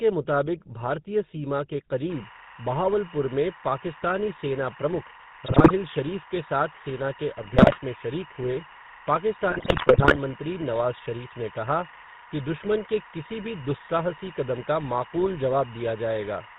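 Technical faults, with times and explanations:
Throughout: GSM full-rate codec. The speech has a plainly buzzy, gravelly roughness, consistent with the 13 kbps GSM full-rate coder. It rebuilds the voice from a vocal-tract model driven by sparse, regular pulses. It drops everything above 4 kHz, so the sound is dull and rasping.
2.10 to 16.59 s: timecode bleed. Right after "मुताबिक भारतीय सीमा के", a chirping warble appears behind the speech and stays to the end. It is linear timecode at 24 frames per second leaking in. Its square wave flips between tones near 1 and 2 kHz, about 20 dB below the speech.
5.46 to 5.71 s, 7.42 to 7.80 s, 9.50 to 10.17 s: GSM bit errors. The speech breaks into squawks, pops and gargling. Corrupted bits reached the decoder, scrambling filter, pitch and gain values. Each damaged frame bends the spectrum or jumps in level. The last burst is longest.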